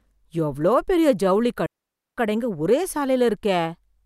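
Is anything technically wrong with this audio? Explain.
Yes. From 1.66 to 2.18 s, just after "எவ்ளோ பெரிய", a digital wireless dropout mutes the speech for 0.52 s: the receiver lost data and faded to clean near-silence, with no noise burst like an analog dropout.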